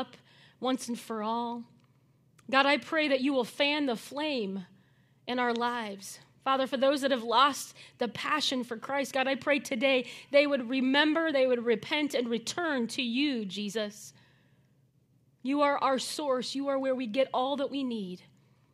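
Computer activity noise runs from 8.50 to 10.50 s in this speech clip, after "that have lost the" and before "remember they would repent". It is a faint buzz pulsing roughly 500 times a second, far beneath the voice, produced when the computer's changing load disturbs the audio circuit's shared ground.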